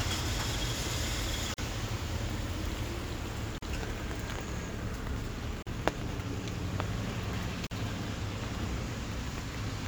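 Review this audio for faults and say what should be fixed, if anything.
Gaps at joins of encoded pieces: separately encoded 2-second segments were joined with their encoder delay and end padding left in. This puts silences of about 42 to 43 ms into continuous sound at 1.54, 3.58, 5.62 and 7.67 s, each with smeared edges. To prevent it, trim each segment's encoder delay and padding before joining, or encode the material as one continuous stream.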